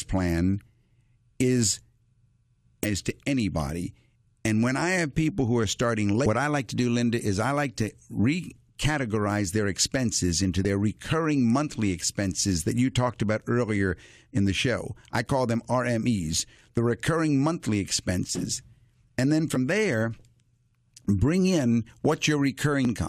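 Damaged data in a compressed stream breaks up this speech clip at 2.84 to 2.86 s, before "to anybody", and at 6.25, 10.64, 19.55 and 22.85 s. Corrupted frames there are misread or rejected, so the decoder loses sync and hunts for the next frame header.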